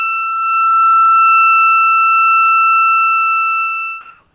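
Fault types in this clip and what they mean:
Comfort noise in place of the background: from 4.01 s to the end at 4.35 s, roughly the last 340 ms, the real ambience, which sits about 48 dB below the loudest passages, gives way to a steady, featureless hiss whose level differs by about 5 dB. The likely cause is discontinuous transmission: the sender stopped sending during the quiet stretch, and the receiver filled it with synthetic noise, band-limited to 4 kHz like the G.711 call path.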